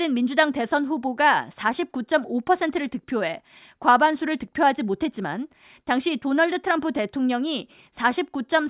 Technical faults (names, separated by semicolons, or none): none